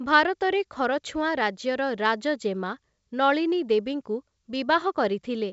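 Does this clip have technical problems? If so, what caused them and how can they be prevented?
No, this clip has no technical problems, so there is nothing to prevent.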